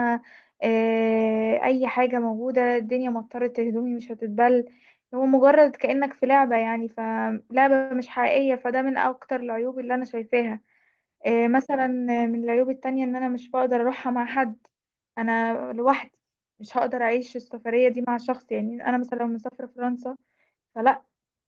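At 7.75 s the speech stalls into a brief fading buzz for about 150 ms before resuming intact: a call audio freeze, likely from delayed packets draining the jitter buffer.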